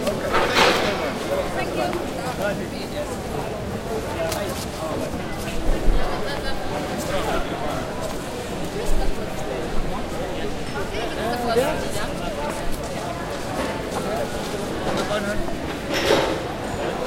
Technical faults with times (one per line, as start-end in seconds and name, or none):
none